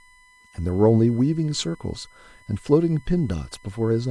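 Across the whole recording, current drawn by the USB bus in its 1 ms frames is leaking into the audio path through the power or ground lines, producing USB whine. It sits under the speech as a steady, fixed-pitch tone built on 1 kHz, with its strongest component at the 2 kHz multiple, about 35 dB below the speech. It is faint but constant.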